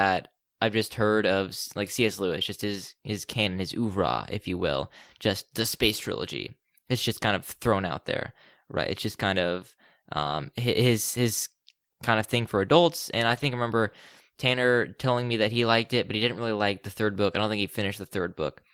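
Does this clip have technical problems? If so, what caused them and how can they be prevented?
Yes. Two brief patches of lost packets rebuilt from error correction occur, 10.19–10.33 s (after "just kind of", before "his his kind of") and 13.29–13.43 s (before "I remember"). Each covers about 80 ms, which points to four lost packets, played from the low-bitrate copies carried in the following packets. Unlike concealment, nothing drops out or smears into a repeated buzz. The speech simply turns rougher and noisier. Reducing network loss, or raising the error-correction bitrate, prevents this.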